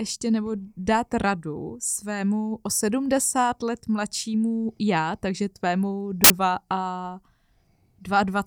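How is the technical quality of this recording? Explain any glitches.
The recording has one clear glitch: at 6.24 s, right after "mladšímu já takže tvému", a sudden blast of very loud white noise cuts in with hard edges and stops just as abruptly at 6.30 s, about 60 ms later. This is file tags played as audio. An embedded cover picture, stored as compressed data, was read by the player as if it were samples. Compressed bytes look essentially random, so they come out as loud, flat static.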